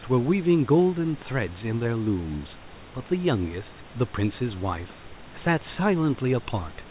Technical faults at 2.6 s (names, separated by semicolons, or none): none